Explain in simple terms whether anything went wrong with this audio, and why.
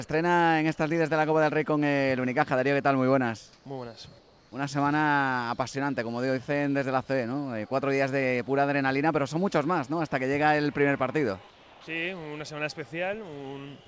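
The quiet background briefly turns into flat, featureless hiss at 3.53–3.65, 4.19–4.52 and 11.51–11.87 s, likely comfort noise in place of the background filling pauses the call sender skipped.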